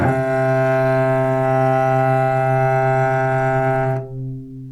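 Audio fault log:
Nothing faulty turns up anywhere in this recording of sounds. There is no event to log against any moment of it.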